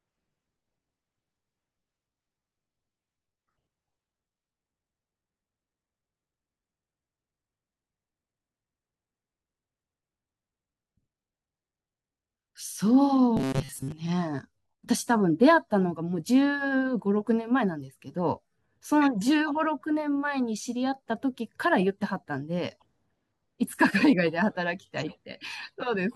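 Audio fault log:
13.37–13.92 s: robotic sound from repeated short buffers; rigid metallic 133 Hz buzz, likely a buffer of about 7.5 ms repeated for most of the span.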